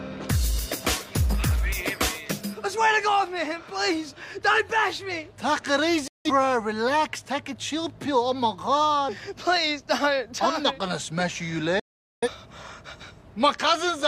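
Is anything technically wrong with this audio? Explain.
Yes. At 6.08 to 6.31 s and again at 11.79 to 12.28 s the sound snaps to silence within about 3 ms and resumes later, dropping roughly 0.17 s and 0.43 s. This is a digital broadcast dropout: the receiver muted while frames were lost or corrupted, consistent with about four and ten frames missing.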